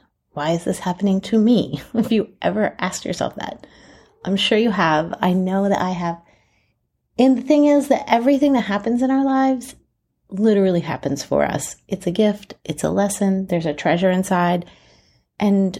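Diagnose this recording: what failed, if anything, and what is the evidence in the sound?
Nothing failed; no faults heard.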